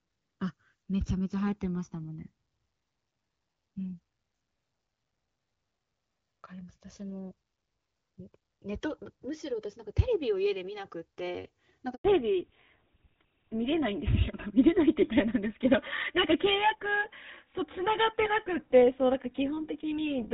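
Speech recorded on two channels whose clocks disagree by something like 200 ppm shows channels drifting apart: the inter-channel delay creeps up to around 4 ms by the end, so a mono sum gives slow, sweeping flanging rather than the fixed comb coloration a constant offset would produce. At 11.94 s a handover gap silences the audio for 100 ms; the sound fades out quickly and stays silent while the call switches networks, unlike a dropout that crackles or repeats. From 12.04 s to the end comes fallback to narrowband, which fits a switch from AMR-WB at 12.65 kbit/s to GSM full rate: nothing survives above 4 kHz, and the voice turns duller and rougher. The change is a permanent step at the handover, not the gradual muffling of a moving microphone, and it ends the crisper HD Voice sound of the first part.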